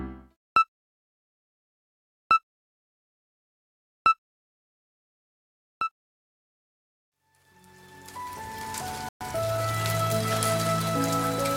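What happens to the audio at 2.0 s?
Nothing goes wrong at 2.0 s: the audio runs through that moment intact, with no dropout, click, glitch or other fault.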